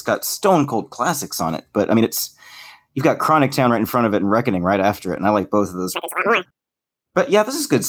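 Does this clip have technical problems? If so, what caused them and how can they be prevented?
Yes. From 5.95 to 6.45 s the speech lurches to double speed, a full octave higher. This is audio read two samples at a time (double speed): each sample pair was taken as one frame. Matching the reader's channel count and sample width to the source prevents it.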